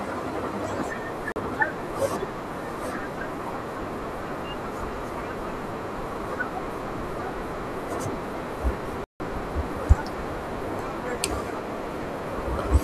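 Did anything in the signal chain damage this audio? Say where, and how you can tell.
Yes. There are two blocks of digital silence in the speech: a 40 ms dropout at 1.32–1.36 s and a longer 160 ms hole at 9.04–9.2 s. In each, the signal drops straight to silence and returns with no fade. The first is heard as a short hole, the second as a longer gap. Hard-edged zeroed blocks like these point to the driver or buffer stage, where output samples were not delivered in time.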